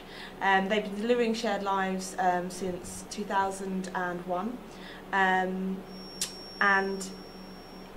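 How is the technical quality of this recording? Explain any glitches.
The recording has one clear glitch, a feedback whistle. From 5.81 s to the end at 7.97 s, a thin, steady tone near 5.5 kHz sits well below the main sound, swelling and fading slowly in level. The likely cause is a loudspeaker-to-microphone loop hovering at the edge of feedback. Unlike a runaway howl, it never builds up, and its slow swelling and fading sets it apart from a fixed electrical tone.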